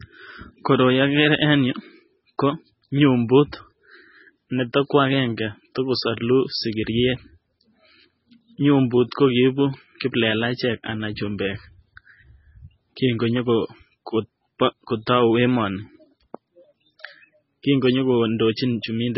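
Throughout the speech, the sound is watery and swirly, with nothing above 5.6 kHz. The damage is heavy. It is likely MP3 compression at a very low bitrate, perhaps near 16 kbps. Weak frequency lines drop in and out between frames, and the treble is cut off.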